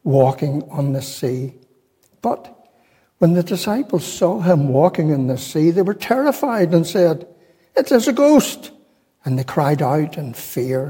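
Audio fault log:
No technical faults can be heard anywhere in this audio.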